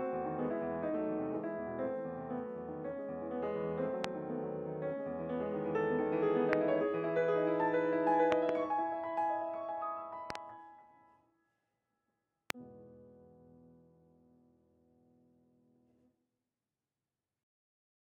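Loud pops occur at 4.04 to 4.06 s, 6.53 to 6.55 s, 8.32 to 8.51 s as two pops, 10.30 to 10.37 s as a closer pair, and 12.50 to 12.52 s. Each is a sharp transient peaking roughly 15 to 25 dB above the sound, which continues underneath. The likely cause is a brief voltage step or pulse entering the chain, from a connector, a switch, static discharge or a driver glitch, which the following circuitry shapes into a thump.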